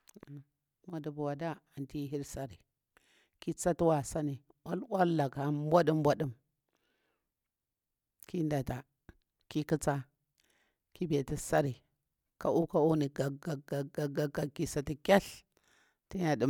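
No technical faults can be heard anywhere in the speech recording, so there is nothing to place on the timeline.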